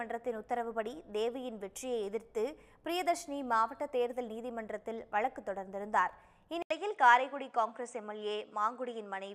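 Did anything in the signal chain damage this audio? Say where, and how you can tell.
Yes. At 6.62 s there's an 80 ms dropout, and from there to the end the top of the spectrum is gone, with nothing above 9.4 kHz, plus a different, faint noise floor around 55 dB down. Loudness barely moves. That points to the capture stage, most likely an input switched to a poorer device: the driver changed microphones mid-recording, and the new one's narrower band and its own hiss come through.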